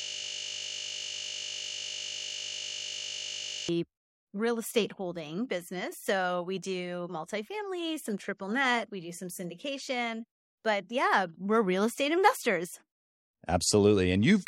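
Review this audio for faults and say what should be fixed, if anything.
A system hang loop is already under way when the audio begins and lasts until 3.69 s. The computer or its audio driver stalled while the sound hardware kept replaying the same 20 ms ring buffer. One tiny slice of speech repeats exactly, well over a hundred times, and merges into a steady 50 Hz buzz. The speech returns only when the system recovers. To prevent it, give the audio thread real-time priority and add a watchdog that mutes output when the buffer stops being refilled.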